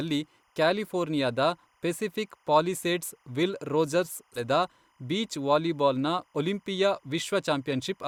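Timecode bleed runs through the whole of this speech recording as a faint, steady chirping warble sitting roughly 40 dB below the voice. Linear timecode from a neighbouring track or cable has leaked into the audio path, and its square wave flips between tones near 1 kHz and 2 kHz as the bits change. It repeats at 25 frames per second, which gives the interference its regular, ticking rhythm under the talker. A stream segment skipped at 4.35 to 4.40 s, right after "ಪೆಸಿಫಿಕ್ ಪಾಲಿಸೇಡ್ಸ್ ವಿಲ್ ರೋಜರ್ಸ್", produces an abrupt jump in the speech with a small blip at the join. The likely cause is a segmented stream in which one chunk failed to load and playback carried straight on with the next, so the continuity of the speech breaks at that point rather than fading or smearing.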